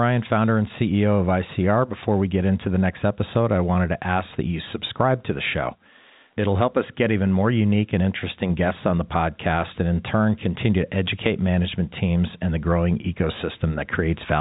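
No technical faults can be heard in this speech. The G.711 telephone coding is working as it should, with nothing above about 3.8 kHz and at most a faint quantisation hiss that follows the level of the speech.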